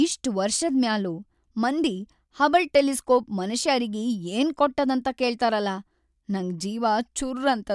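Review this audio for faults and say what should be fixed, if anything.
Nothing here needs fixing, as the recording holds together without any audible technical problems.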